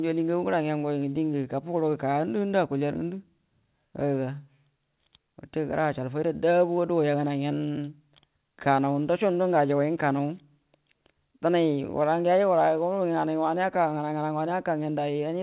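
No faults are audible in this speech; the call path is working as intended, with nothing above 4 kHz, a band limit that fits G.711 mu-law coding at 64 kbps.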